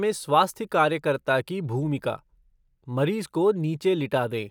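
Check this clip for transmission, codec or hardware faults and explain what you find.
Nothing stood out on listening to this speech recording; no transmission, codec or hardware problem could be heard anywhere in it.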